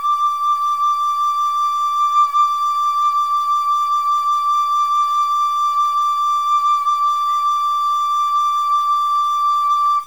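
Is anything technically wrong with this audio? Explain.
Yes. A stuck bit runs through the whole music clip. The distortion is most likely caused by one data bit held fixed at 0 or 1, perhaps from a broken data line or a converter fault. That forces roughly half the samples to be wrong by a step of about -40 dBFS, in a pattern that follows the waveform. The result is a harsh, buzzy grit on the music, and quiet passages fill with a hiss-like noise floor.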